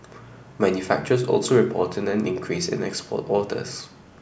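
Nothing to report; no technical faults can be heard at any point in the speech.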